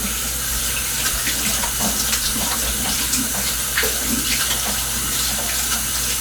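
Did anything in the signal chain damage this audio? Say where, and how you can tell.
No, nothing along the chain seems to have harmed these everyday sounds, so there's nothing here to trace back to any stage.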